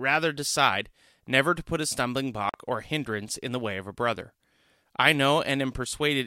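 Speech, with one audible dropout. At 2.49 s, right after "to put a stumbling", the sound cuts to silence for about 45 ms. It resumes at 2.54 s, just before "or hindrance in the". The gap is clean and total. That pattern points to a Bluetooth stall as the likely cause. Radio interference delayed the audio packets. The headphone buffer emptied, and playback paused until the retransmitted data arrived.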